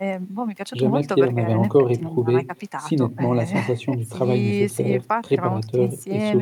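Speech recording with no audible technical faults.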